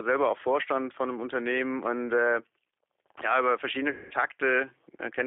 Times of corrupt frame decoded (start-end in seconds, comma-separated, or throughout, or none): none